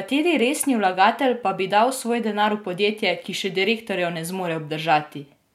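A speech recording with nothing technically wrong with it at any point.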